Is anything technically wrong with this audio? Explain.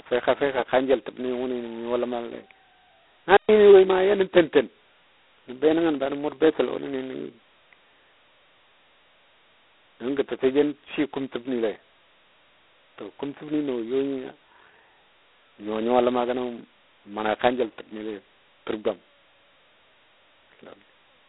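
Yes. Two faults can be heard.

Throughout, the speech carries G.726 ADPCM damage. The codec sends only a few bits per sample of error from a running prediction. Here a harsh, rasping hiss rides on the speech level, which fits the 16 kbit/s mode. The band is narrow, roughly 300 Hz to 3.6 kHz, with nothing above 3.9 kHz.

From 3.37 to 3.49 s there is a playback stall. The sound cuts out mid-flow for 120 ms, then resumes. The likely cause is the player running short of data or its thread being blocked, leaving the output silent until it caught up.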